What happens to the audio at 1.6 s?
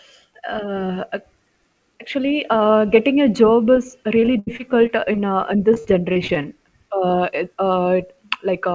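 Nothing goes wrong at 1.6 s: the speech passes through intact, carried by the call path at its usual bandwidth, with nothing above 8 kHz.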